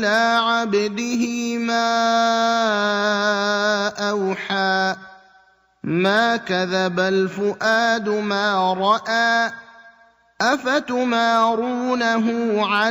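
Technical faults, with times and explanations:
0.08–0.38 s, 6.06–6.20 s and 12.74–12.87 s, hard clipping: peaks exceed the stage's maximum by about 1 dB, about 2 dB and about 1 dB, so their tops are sheared flat. The flattened waveform adds high harmonics, heard as brief crackle on the loudest moments.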